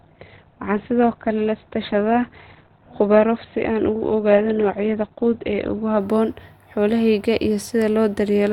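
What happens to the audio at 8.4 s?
Nothing goes wrong at 8.4 s; the speech continues intact through that point with no dropout, click or distortion.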